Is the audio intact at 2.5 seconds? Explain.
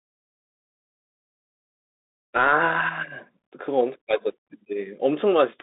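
No. At 2.5 seconds, as across the whole clip, the speech runs through a Bluetooth CVSD headset codec, consistent with a 64 kbit/s one-bit stream whose adaptive step lags fast changes. The band sits near 300 Hz to 3.7 kHz, nothing above 3.8 kHz, with s sounds scratchy over granular hiss.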